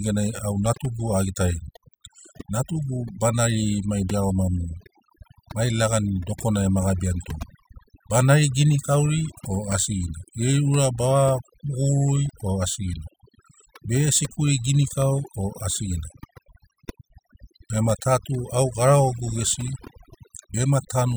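Overdone noise removal runs through the whole speech clip, from start to finish. A noise reduction stage set far too aggressively is clamping individual frequency bands down or out whenever their level sits close to its noise estimate, so the background drops and breaks up into twinkling, chirpy specks. The quieter parts of the voice fall under that same threshold and get stripped away.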